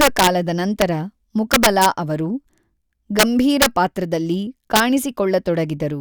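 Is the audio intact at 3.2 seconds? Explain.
No. From 3.19 to 3.23 s the speech suffers integer overflow: a loud peak pushed about 4 dB past the largest representable sample value, and instead of being held at the limit it wrapped around to the opposite extreme. The result is a harsh, violent crack, far sharper than ordinary clipping. On a waveform the tops of the peaks jump abruptly to the opposite sign; a spectrogram shows a bright vertical broadband streak across all frequencies there.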